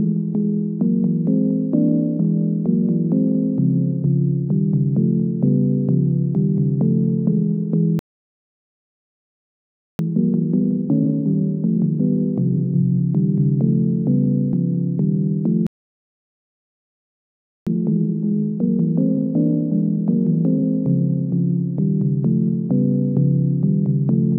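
At 7.99 s and again at 15.67 s the audio halts in a playback stall, two seconds of complete silence each time. The player likely ran short of data or was blocked. Unlike a brief dropout, the gap is long. Right after each stall, from 9.99 to 12.99 s and from 17.67 to 20.67 s, time-compressed catch-up runs the sound about 1.25 times fast at unchanged pitch, which separates it from a simple speed-up. It sounds hurried where small pieces are cut out and blended together.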